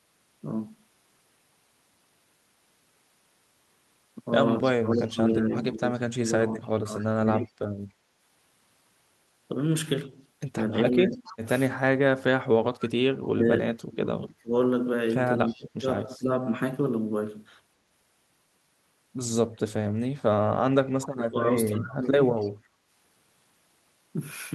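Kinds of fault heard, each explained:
Echo leak: a faint second copy of the voice trails the talker by 276 ms, about 20 dB down around 4.6–7.5 s and 11.1–12.8 s, fainter at 15.5 s and 21.8–22.5 s. It's likely a speakerphone whose echo canceller let some of its own pickup slip back through.
Speech suppressed in double talk: the talker's voice sags, at worst about 25 to 30 dB, in patches during 4.8–7.6 s, 10.1–11.5 s, 13.3–16.3 s and 19.8–22.1 s. It's likely the canceller mistaking overlapping talk for echo and ducking both.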